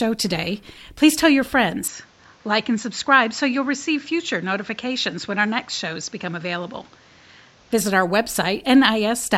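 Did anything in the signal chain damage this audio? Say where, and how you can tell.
Yes: the input likely switched to a poorer device after "today please tell your," from 1.88 to 7.72 s. The sound turns duller with nothing above 7.6 kHz, about 5 dB quieter, over faint new noise.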